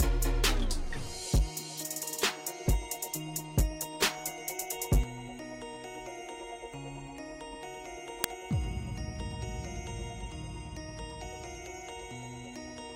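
At 8.24 s an uninitialised buffer played before any audio filled it, so stale memory became a loud 2.9 ms crack, fitting a 128-sample buffer.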